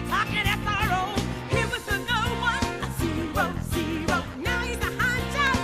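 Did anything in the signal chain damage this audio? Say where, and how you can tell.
Yes. Regular clicks run through the audio from 0.53 s to 5.47 s. There are about ten of them, spaced 0.62 s apart. The steady spacing points to the driver or buffer stage, most likely clock drift buffer slips. Two devices on separate clocks, differing by a few hundred ppm, let the buffer creep until a handful of samples gets dropped or repeated. Each slip breaks the waveform, and you hear a tick.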